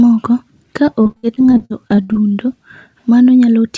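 From about 0.86 to 2.34 s the speech breaks up with repeated packet loss, the robotic-sounding kind. Seventeen short holes land across that stretch, the longest around 57 ms, and each one gets papered over by stretching the last bit of sound, so roughly a quarter of that span is made-up audio. You hear it as a choppy stutter with pieces missing, with the G.722-style band limit at 8 kHz still audible underneath.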